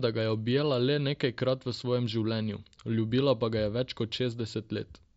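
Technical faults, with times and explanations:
Nothing stood out on listening to this speech, which comes through an mSBC Bluetooth headset link.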